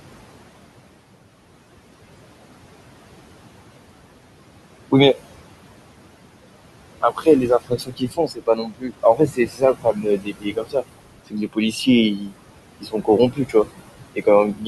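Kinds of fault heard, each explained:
noise suppressor artifacts: Across the whole clip the room noise, which sits about 12 dB below the speech, drops away in the pauses and then returns underneath the speech, so the background seems to pump on and off with the talking. A noise suppressor is estimating which frequency bands hold only steady noise and turning those bands down, frame by frame, by about 21 dB. Wherever speech fills a band, that band stays up and the noise in it comes through.
speech cut by the noise suppressor: Parts of the speech turn faint or swallowed, as though pulled down along with the background, from 7.01 to 10.84 s, from 11.27 to 12.33 s, from 12.78 to 13.66 s, and from 14.14 s to the end. The drops reach about 19 to 22 dB. The suppressor has taken these quieter stretches of speech for noise and attenuated them. About two seconds are affected in the first span and a fraction of a second in each later one.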